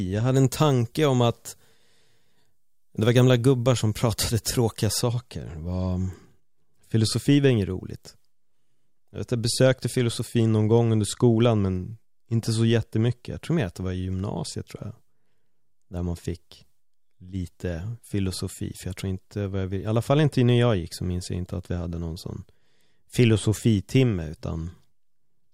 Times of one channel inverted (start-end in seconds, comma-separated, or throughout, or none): none